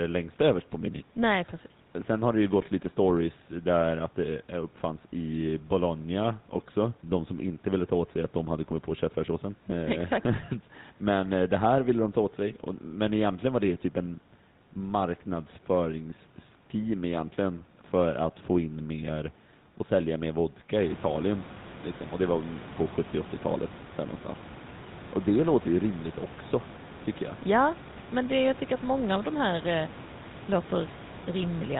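Throughout, the speech has passed through the GSM full-rate codec, its excitation pulses kept sparse and everything above 4 kHz cut away, which fits a 13 kbps stream. The damage is plainly audible as a buzzy, gravelly roughness over a dull, band-limited voice. The room noise jumps by about 16 dB around 21 s, settling about 19 dB below the speech.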